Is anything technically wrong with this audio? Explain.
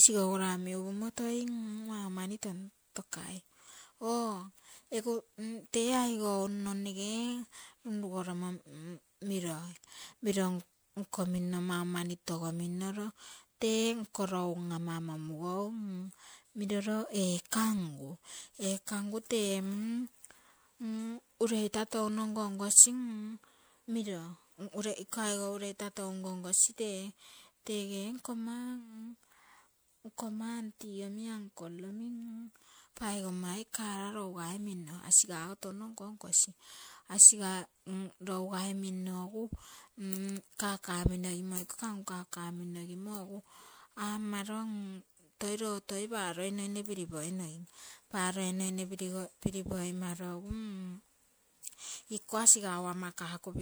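Yes, the speech has generation loss throughout: it sounds swirly, hollow and smeared, with blurred attacks, likely from around seven MP3 passes, consistent with 128 kbit/s re-encoding.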